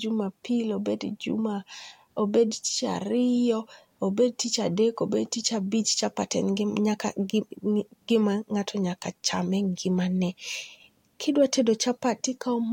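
Listening closely to the speech, nothing technical stood out at any point.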